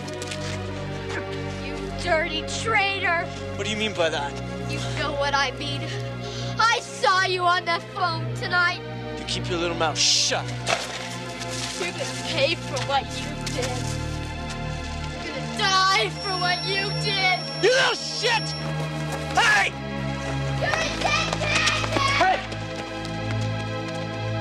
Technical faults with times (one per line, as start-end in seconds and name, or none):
16.11-18.71 feedback whistle